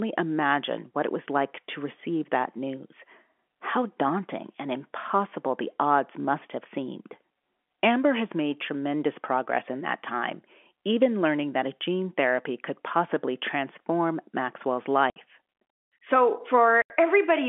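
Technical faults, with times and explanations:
15.10–15.16 s and 16.82–16.90 s, packet loss filled with silence: the speech drops out for 60 ms and then 80 ms, which fits whole 20 ms packets missing. The receiver inserts pure silence, so each hole starts and ends abruptly, and the G.711 telephone band continues around it.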